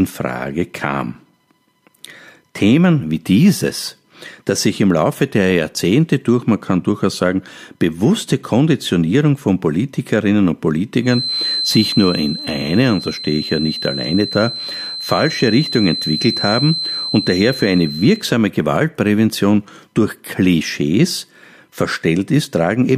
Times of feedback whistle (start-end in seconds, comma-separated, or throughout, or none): 11.00-18.28